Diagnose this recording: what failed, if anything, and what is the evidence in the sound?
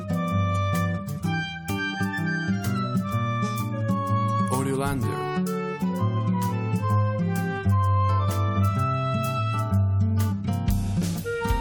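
Nothing failed; no faults heard.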